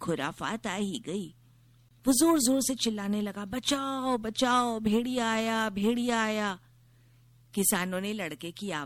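MP3 compression runs from the start of this speech clip and is plainly audible: weak frequency detail flickers in and out between frames. The result is a watery, swirly sound with smeared consonant attacks, likely from encoding at a low bitrate that fits about 64 kbps.

A gap at a join of encoded pieces opens from 1.89 to 1.91 s, a silence of about 23 ms. Two separately encoded sections were joined without trimming the encoder's start-up delay and end padding. The result is a brief dropout with edges smeared by the codec, after which the sound resumes where it stopped.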